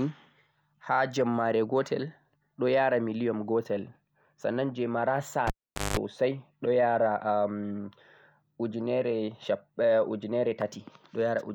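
A speech clip with a cable pulled and plugged in at 5.47–5.97 s, just after "gotel sannan je mara": pop, roughly 450 ms dropout, including about 185 ms of 50 Hz mains buzz before reconnection.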